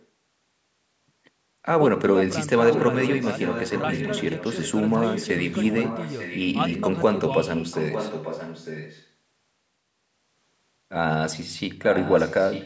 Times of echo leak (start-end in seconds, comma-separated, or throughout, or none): 0.00-0.06, 2.64-6.83, 7.37-9.08, 11.92-12.66